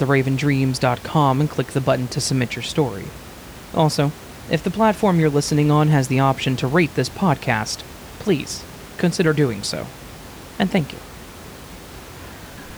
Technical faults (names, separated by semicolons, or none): none